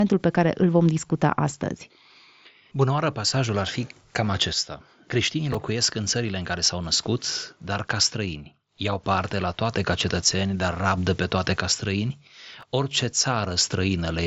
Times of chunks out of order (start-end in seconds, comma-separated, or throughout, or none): 5.53-5.55, 12.61-12.63